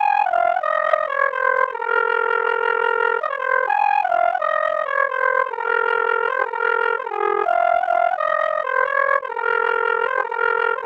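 A recording of everyday sound carries a harsh flutter from start to finish, the level pumping up and down around 40 times a second with a swing of about 60 dB. That is overlap-add ripple: the audio was split into windowed frames and rejoined with an overlap that never sums to a steady gain, so loudness dips once per frame. Separately, a brief glitch of misplaced energy appears from 0.90 to 0.95 s, lasting about a couple of frames. This is a corrupt frame decoded: damaged bits were played back as if valid, scattering energy into the wrong frequencies.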